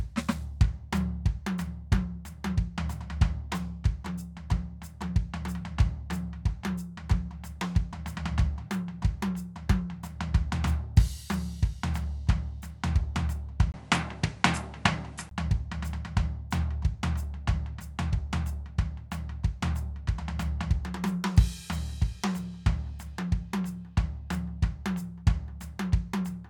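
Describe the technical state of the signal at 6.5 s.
At 6.5 s the music plays through intact, with no dropout, click, distortion or other technical fault at that point.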